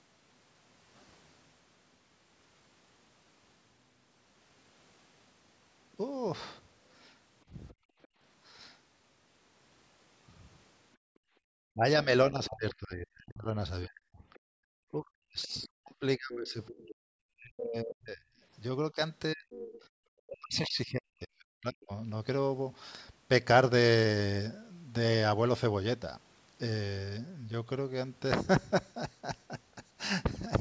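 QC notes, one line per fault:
7.68–8.08, 14.34–14.40, 15.43–15.64 and 19.5–19.79 s: other side's voice leaking through. A second voice surfaces in brief scraps, very faint in the first three and much clearer at 19.5 s, roughly 15 dB under the talker. Likely loudspeaker sound that the echo canceller failed to fully remove from the microphone.
7.74–8.2, 10.97–11.45 and 14.46–14.63 s: background gated by the echo canceller. The room sound drops out abruptly, by about 28, 34 and 40 dB respectively, then returns. The canceller clamped the microphone down hard while the far end was playing, taking the ambience with it.
11.73–21.91 s: speech suppressed in double talk. Across this stretch the talker's speech repeatedly dips, thins and breaks off, sometimes by around 40 dB, for about 7 s in total. This is likely the canceller mistaking its own talker for echo while both sides spoke and turning everything down.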